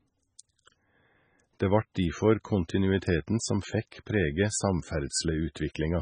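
Throughout, the speech was likely starved of bits by MP3 compression, fitting roughly 16 kbps: everything above 9.3 kHz is gone, leaving heavy watery, swirling artefacts.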